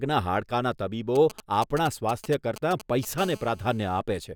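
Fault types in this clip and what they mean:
GSM signalling bursts: Galloping ticks and short 217 Hz buzzes from 1.16 to 3.20 s, roughly 15 dB below the speech, from a nearby 2G phone's signalling bursts being rectified by the audio circuit.
GSM phone buzz: A steady, raspy 217 Hz buzz rich in harmonics from 3.20 to 4.00 s, about 23 dB below the speech, as a nearby phone in a call transmits in bursts 217 times a second.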